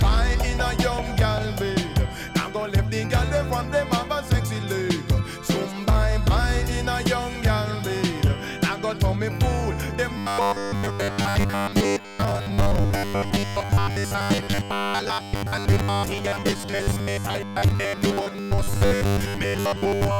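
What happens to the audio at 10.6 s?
Fresh audio is likely arriving too seldom, so playback keeps repeating its last 10 ms buffer in place of skipped material for most of the span. This robotic sound from repeated short buffers runs from 10.18 s to 20.19 s as a rigid, metallic 100 Hz buzz.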